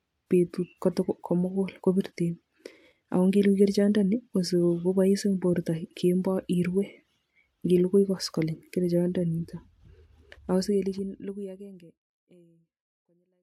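No technical faults can be heard in this speech.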